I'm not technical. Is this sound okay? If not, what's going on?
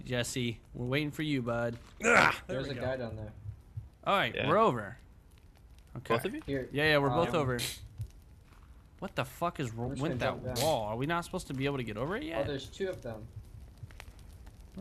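Yes, nothing in this recording points to a technical problem with the signal itself.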